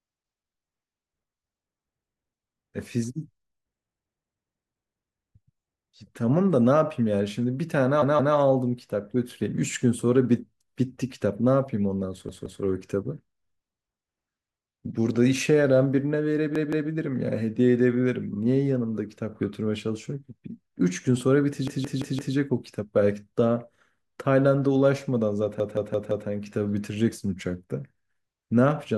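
Repeated buffer at 8.02, 12.29, 16.56, 21.68 and 25.6 s in this speech clip. A 171 ms stretch plays again with a hard join at each repeat. It recurs twice more in the first three events and four times more in the last two, giving stutters of about 0.34 s and 0.68 s. This fits an 8192-sample buffer being replayed while fresh audio arrived late, and nothing seems to be skipped afterwards.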